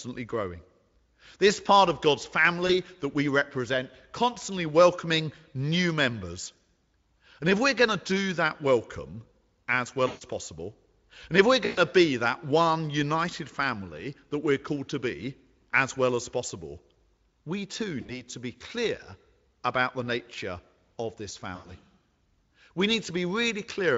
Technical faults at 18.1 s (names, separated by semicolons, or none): VoIP packet loss concealed by the speech codec